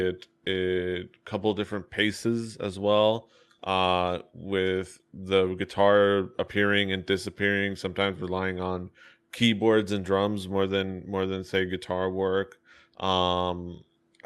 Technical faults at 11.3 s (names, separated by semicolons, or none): none